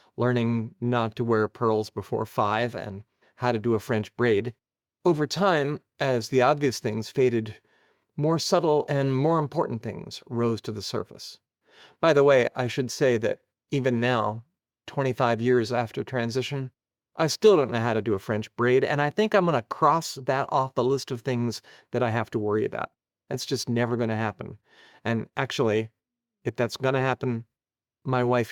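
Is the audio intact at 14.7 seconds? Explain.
Yes, the audio is intact at 14.7 seconds, with no dropout, click, distortion or other fault at that point.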